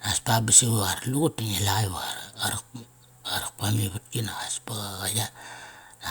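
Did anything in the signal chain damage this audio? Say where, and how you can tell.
No, nothing in the signal chain has audibly damaged this speech recording. No stage from capture through to playback has left a trace that points to a problem.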